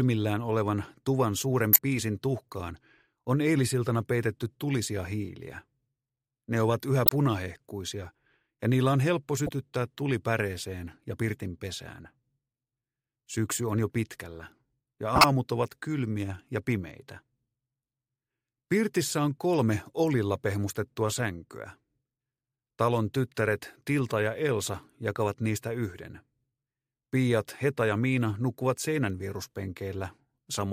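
At 1.73–1.79 s, 7.06–7.12 s, 9.47–9.49 s, 12.05 s and 15.15–15.24 s, short bursts mark a corrupt frame decoded. Flipped bits in the compressed stream reached the decoder, which reconstructed them with wrong gains and codes, putting energy at wrong frequencies. The first, second and last sound like loud chirps or noise bursts peaking near -10 dBFS. The 9.47 s blip is softer, and the 12.05 s one is a faint tick.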